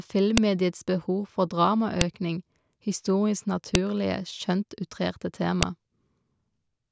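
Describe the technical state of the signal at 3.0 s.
At 3.0 s the speech signal is intact, with no audible dropout, distortion or other fault at that moment.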